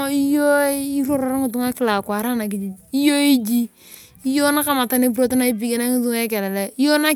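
Just a short bit of speech here, and there's nothing technically wrong with it to point to at any moment.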